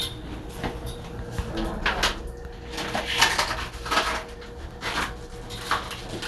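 The recording of everyday sound is dull and capped, with nothing above about 12.2 kHz, and a plainly audible gurgling, granular grit runs through the entire clip as upper bands flicker in and out. This is likely MP2 compression starved of bits, consistent with roughly 80 kbps.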